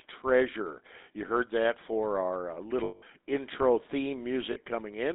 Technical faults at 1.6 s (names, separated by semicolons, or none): GSM full-rate codec